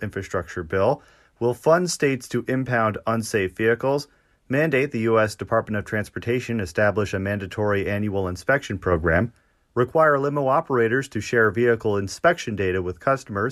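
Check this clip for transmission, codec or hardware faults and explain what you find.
Nothing in the speech signal points to a technical problem anywhere along its path from capture to playback.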